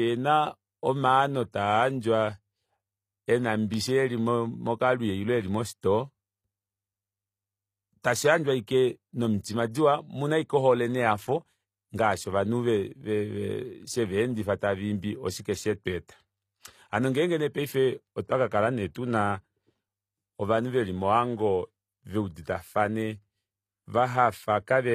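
From start to finish the speech carries plainly audible HE-AAC compression damage, likely from encoding at a low bitrate around 24 kbps. Only the lower spectrum is coded directly, and the treble is rebuilt by copying lower bands upward under a coarse envelope. The top end therefore sounds synthetic, with s sounds coming out gritty and lispy. Nothing is present above about 14.9 kHz.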